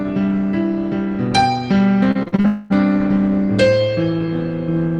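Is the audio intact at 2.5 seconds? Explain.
No. From 2.11 to 2.46 s, repeated packet loss opens five short holes, the longest 40 ms, each patched by repeating the preceding sound. Nearly half that stretch is concealment, so it comes out choppy and robotic, with pieces missing.

At 2.5 s itself, a long network dropout likely stopped audio arriving from 2.46 to 2.72 s. The receiver fills all 240 ms by stretching the last sound into a buzzy, fading continuation with no silent gap. The original material there is lost.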